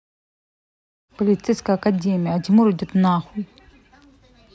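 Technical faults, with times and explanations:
No technical faults detected.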